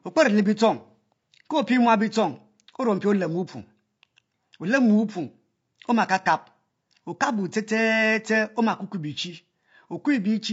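Low-delay AAC compression runs through the whole speech clip, plainly audible as a rough, grainy texture with noise between the harmonics and a thin, synthetic top band. The short frames resolve pitch poorly, which likely points to AAC-ELD at around 32 kbps.

AAC frame loss with concealment appears from 6.23 to 6.27 s as a brief smeared, noisy patch. The decoder rebuilt the missing stretch from the last good spectrum, and the short gap suggests a single lost frame.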